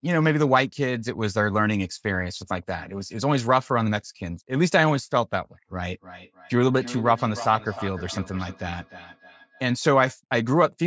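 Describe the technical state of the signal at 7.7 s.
At 7.7 s the signal carries feedback echo between two devices, running from 5.88 to 9.74 s. A second device is replaying this microphone's audio, which is picked up again, so the sound returns thinner and ringing roughly 300 ms later, peaking about 15 dB below the speech.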